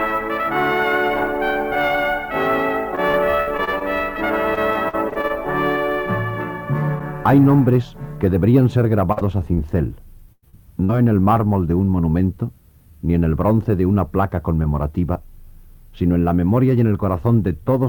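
From 2.95 to 5.31 s and again from 9.12 to 10.91 s, repeated packet loss (robotic sound) makes the audio choppy, with pieces missing. Many brief holes, up to about 100 ms, are patched by extending the previous sound. Unlike a single dropout, the gaps keep recurring.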